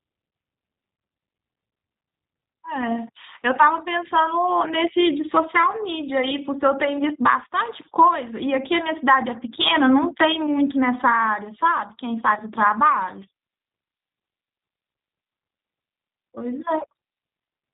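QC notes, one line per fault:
Throughout: G.729 codec damage is plainly audible across the speech. The top end stops at about 4 kHz, and voicing has a rough, slightly synthetic grain. This fits an 8 kbit/s G.729A-style coder, which rebuilds each 10 ms frame from a vocal-tract filter, a pitch predictor and a sparse set of pulses. It keeps intelligibility but discards fine waveform detail.
6.97–7.02 s and 12.35–12.42 s: VoIP packet loss concealed by the speech codec. Each event is a brief buzzy or noise-like, smeared stretch where the decoder repeated its last pitch and filter at falling gain, followed by a short weak or distorted recovery because each frame depends on the previous one. The first gap fits one lost 10 ms frame and the second fits two frames (20 ms), so the later one sounds longer.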